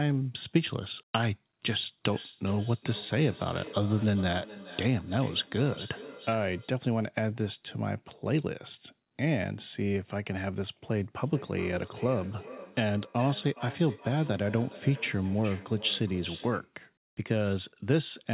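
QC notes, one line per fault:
2.12–6.79 s and 11.24–16.77 s, feedback echo between two devices. Each phrase returns at a steady interval of roughly 0.4 s. The repeats sound thinner and more ringing each pass. They peak at about 15 dB and about 16 dB below the speech. A second device in the room is replaying the call, and this microphone is picking it up again. The local echo canceller cannot remove sound from the other device, so the loop keeps circulating.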